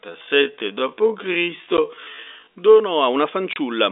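Speech over a telephone-band line: the opening stretch from 0.0 to 2.8 s drags at roughly 0.55 times normal pace while the pitch holds steady, before the pace snaps back just before "a una". That is most likely a time-stretched section, where software slowed the audio by repeating short slices to lengthen it without lowering the pitch. Two hard-edged holes also cut in, a 10 ms gap at 1.77 s and a 30 ms gap from 3.53 to 3.56 s right after "a una". That is packet loss filled with silence, where missing packets were replaced by dead air, and the gap lengths fit 10 ms packets.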